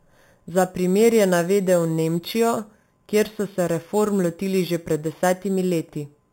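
From start to finish the speech carries imaging from sample-and-hold upsampling. The audio appears to have been raised from an 8 kHz rate to 44.1 kHz by repeating samples without a smoothing filter. This leaves a bright metallic fizz that tracks the voice at about 18 dB below it. On a spectrogram, a mirrored copy of the harmonics fills 4 to 8 kHz, bending downward as pitch rises. Zoomed in, the waveform shows small stair-steps.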